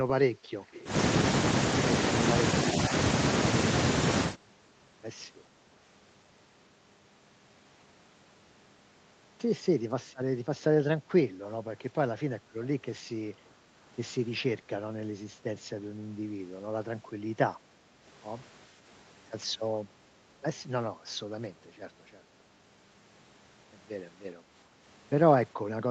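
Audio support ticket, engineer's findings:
Echo leak, 0.67–0.85 s: faint delayed copy of the talker, around 420 ms late and roughly 20 dB down. Likely the far-end canceller letting loudspeaker pickup through.

Speech suppressed in double talk, 2.72–2.92 s: talker dips a few dB in short bits totalling about a tenth of a second while both sides overlap. Likely canceller ducking both.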